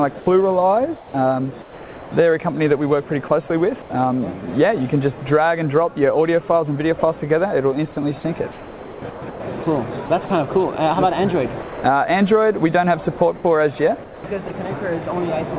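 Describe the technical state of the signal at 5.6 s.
At 5.6 s the audio is intact, with no fault, only the steady telephone-band sound of the call path, whose G.711 coding leaves nothing above 4 kHz.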